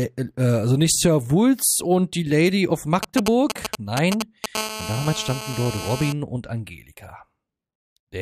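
From 3.03 to 4.46 s, GSM signalling bursts break in: a nearby 2G handset exchanging short control transmissions, its radio pulses rectified by the audio circuitry. The result is a galloping dit-dit-dit of brief 217 Hz buzzes, nearly as loud as the sound itself.

From 4.55 to 6.13 s comes GSM phone buzz, as the handset moves into a call and transmits continuously in 217 Hz bursts. The rectified pulses give a steady, harsh, harmonic-rich rasp at 217 Hz, about 10 dB below the sound and unrelated to it.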